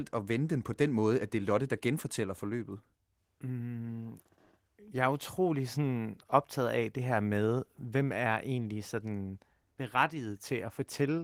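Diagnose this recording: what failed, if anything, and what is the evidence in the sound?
Nothing in the chain failed: the speech arrives through the Opus voice compression with its full audio band intact and only the light coding texture expected of a hybrid-mode encode at a bitrate around 20 kbps.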